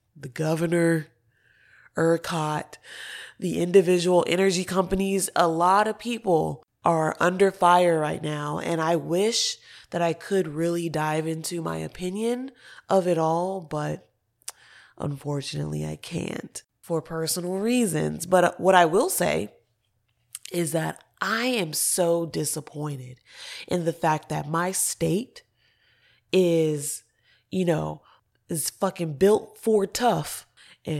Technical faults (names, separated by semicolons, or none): none